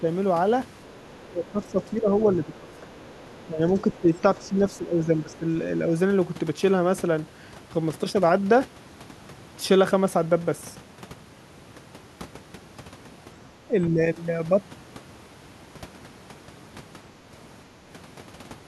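The speech is suppressed in double talk at 0.00 to 0.05 s, dipping by about 5 dB. Both ends were likely talking at once. The echo canceller then couldn't tell the talker from loudspeaker echo, so it turned everything down.

From 0.84 to 1.0 s, the other side's voice leaks through, faint, at about 35 dB below the speech. The canceller likely left some loudspeaker sound in the microphone signal.

The longest suppression runs from 1.25 to 5.45 s. The speech sinks by up to about 10 dB, in stretches totalling around three seconds. Inside that span, scraps of the far voice leak through at 2.77 to 3.46 s, 3.95 to 4.45 s and 5.33 s, each about 30 dB down.

Brief dips follow at 5.86 to 5.93 s, about 5 dB, and at 13.64 to 14.0 s, about 10 dB.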